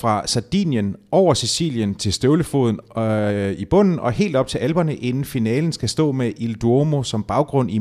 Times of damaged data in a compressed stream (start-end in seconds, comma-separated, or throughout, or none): none